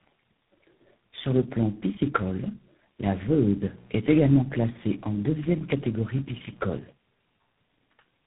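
Speech, carried over a phone path with tandem speech coding across the whole clip. The sound is rough, muffled and warbly, consistent with about three low-rate speech coders in series, each re-coding the previous one's degraded output. On a spectrogram, nothing appears above 3.8 kHz, and harmonics look smeared and blotchy. From 3.22 s to 6.89 s, just after "le plan piscicole la", a steady raspy mains buzz sits roughly 25 dB below the speech. Switching spikes repeat twice per 60 Hz cycle, so the spectrogram shows evenly spaced horizontal lines at multiples of 60 Hz, and the waveform carries a fine 120 Hz comb of spikes.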